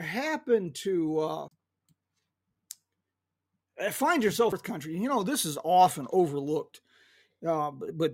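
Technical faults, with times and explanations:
1.48–1.51 s and 4.52 s, CD skips: the speech breaks off with a tick, a mute of about 30 ms at the first and only a few milliseconds at the second, then carries on from a different point. A knock or disc flaw threw the laser onto another turn of the spiral, so playback lands a whole disc revolution or more away. A plain dropout would resume exactly where it stopped.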